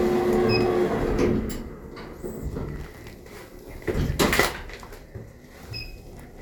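A short recording of everyday sounds, and nothing technically wrong can be heard in it. No dropout, distortion or other disturbance shows up anywhere in the audio.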